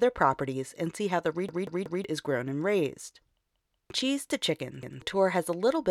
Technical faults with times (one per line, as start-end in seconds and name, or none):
1.49-2.04 repeated buffer
3.53-3.90 repeated buffer
4.83-5.02 repeated buffer